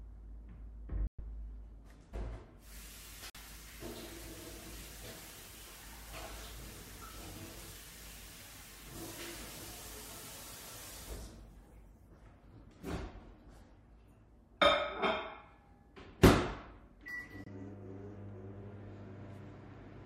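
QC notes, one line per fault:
1.07–1.20 s, Bluetooth dropout: packets likely failed to reach the headphones in time and were discarded, leaving a 116 ms hole, which fits about five lost frames; the sound resumes further along, as if it had kept playing.
3.30–3.36 s, Bluetooth dropout: two late packets likely dropped, cutting 46 ms of sound before it returns mid-stream.
17.44–17.48 s, Bluetooth dropout: a single lost frame likely leaves a brief 23 ms gap.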